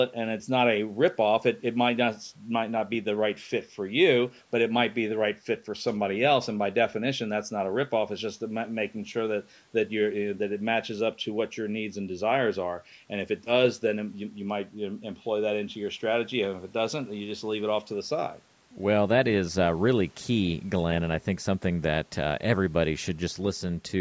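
No technical faults are present in the speech, which shows only the expected effect of call microphone processing, with its trimmed lowest bass and nothing above 8 kHz.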